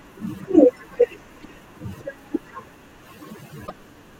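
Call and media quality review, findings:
Damaged data in a compressed stream: short glitches at 1.42–1.44 s and 3.64–3.71 s in speech; decoder misreads corrupted frames and loses sync until the next header.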